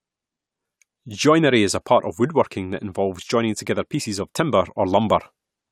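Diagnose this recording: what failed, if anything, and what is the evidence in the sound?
Listening through the speech, nothing stood out as a fault at any point in the recording.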